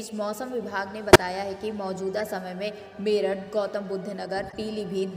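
At 1.13 to 1.19 s, a corrupt frame decoded produces a loud glitch peaking around -5 dBFS, spread over several consecutive frames. A quieter glitch follows at 2.20 s, and a faint one at 4.50 to 4.54 s. In each case the decoder played damaged frame data, so misread gains and codes put energy at the wrong frequencies. The result is a new tonal or noisy burst rather than the dropout or repeated sound of frame loss concealment.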